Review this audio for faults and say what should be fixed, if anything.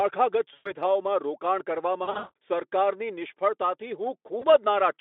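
VoIP packet loss concealed by the speech codec shows up three times: 0.53 to 0.72 s, 2.03 to 2.35 s, and briefly at 4.39 to 4.47 s. The decoder keeps replaying its last pitch and filter with falling gain, so the sound smears into a fading buzz. The middle one is worst, with losses scattered over 320 ms and a longest gap of 180 ms. On the narrow 250 Hz to 3.5 kHz Speex line, recovery stays audibly weak. A jitter buffer with FEC or redundant packets would cut this down.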